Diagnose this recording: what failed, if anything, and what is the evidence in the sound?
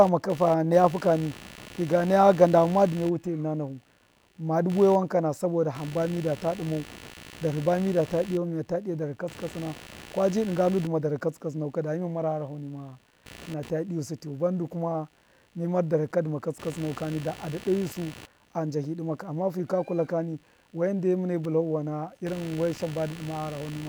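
A rough, pulsing buzz runs under the speech for the whole clip. It repeats at around 70 pulses per second and sits roughly 20 dB below the voice. It rises and falls on its own timing, not with the speech. This is computer activity noise, and it comes in at the analogue wiring stage. Load swings in the processor, graphics card or mouse disturb the ground that the computer shares with the audio input, and that disturbance gets printed into the signal as a chirping buzz.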